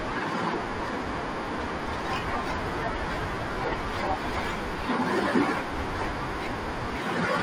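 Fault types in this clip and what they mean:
Imaging from linear upsampling: straight-line interpolation, which fits a 24 kHz to 48 kHz conversion, dulls the top and leaves faint mirrored copies at 12 to 24 kHz, roughly 35 dB down, giving sibilants a slight metallic shimmer.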